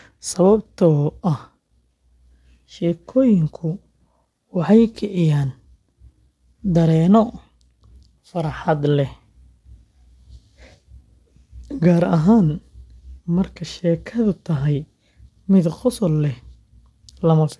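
Aliasing runs through the whole clip. The speech was brought down to a lower sample rate without first removing content above half that rate, so energy above 12 kHz folded back into the band as false frequencies unrelated to the original. The fold point fits a drop from 48 kHz to 24 kHz. The folded components sit around 35 dB below the speech, enough to give sibilants a gritty, metallic edge, and the spectrum runs abruptly up to the 12 kHz limit.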